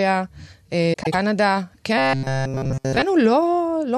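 At 0.93 s the speech turns into a brief garbled flutter that lasts until about 1.15 s. This is frames out of order: two neighbouring blocks of about 96 ms each were decoded in swapped sequence, which fits runs of around four frames apiece. The two halves of that stretch play back to front, with no time lost overall. On a waveform, the envelope jumps abruptly at each join. On a spectrogram, formant tracks break and resume at mismatched heights.

From 1.98 s to 3.02 s the speech becomes robotic sound from repeated short buffers. It is a rigid, metallic buzz fixed at 133 Hz that still loosely follows the syllables. The likely cause is audio arriving too seldom, with the last sliver of about 7.5 ms looped to fill the gaps while real audio is skipped. The repetition runs through the whole stretch. A spectrogram shows evenly spaced horizontal harmonics at multiples of 133 Hz, and the waveform shows a near-identical short cycle repeating.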